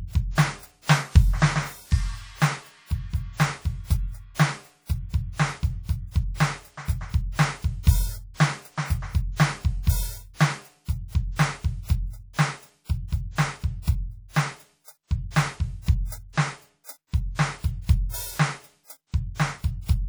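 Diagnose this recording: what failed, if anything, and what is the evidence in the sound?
The codec stage is where this music falls down. Right through the clip there's plainly audible ringing and a washy smear around transients, with a hiss that swells and falls along with the signal. That's what a transform codec does when long blocks spread quantisation noise over tens of milliseconds and starve the weaker lines. Likely WMA compression, and the damage level fits something around 48 kbps, even though the top end still reaches about 20.1 kHz.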